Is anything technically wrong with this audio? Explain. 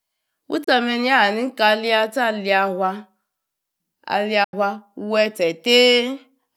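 Yes. The speech has two short holes, at 0.64 to 0.68 s (about 29 ms) and 4.44 to 4.54 s (about 87 ms), most likely Bluetooth dropouts, where audio packets missed their deadline on the wireless link and the headphones played silence instead. The longer gap fits several consecutive lost packets. Each hole has abrupt or briefly faded edges, and the speech resumes later, as if it had kept playing. On a waveform these show as flat near-silent stretches, and on a spectrogram as sharp vertical blank columns across all frequencies.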